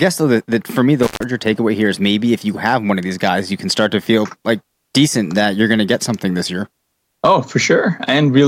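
A speech recording with an intermittent contact: a loose cable or plug opens for about 135 ms between 1.03 and 1.23 s, cutting the sound out with crackle at each edge, after "that that for me" and before "takeaway here is maybe".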